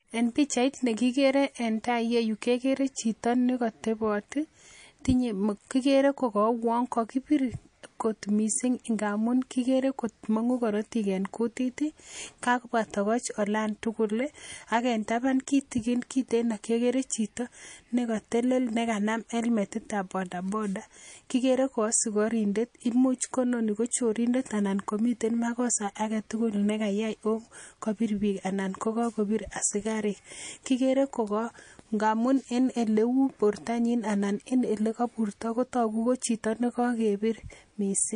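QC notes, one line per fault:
throughout MP3 compression: watery, swirly speech with smeared s sounds, likely from a bitrate near 40 kbps; spectrogram shows a treble ceiling and blocks flickering on and off.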